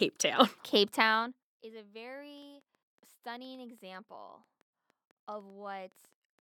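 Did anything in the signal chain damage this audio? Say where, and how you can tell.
Yes. Starting at 2.38 s, just after "is a", a train of clicks ticks over the speech and through its pauses until 6.40 s. There are about twenty clicks, at roughly 5.2 per second but unevenly spaced, and they peak at about the level of the speech itself. Their matching shape suggests a single repeating source. The likely cause is interference from nearby equipment coupling into the analogue wiring, or a faulty connection or power supply injecting pulses.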